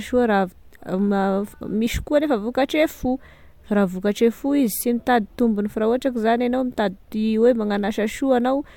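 Nothing stood out on listening to the speech.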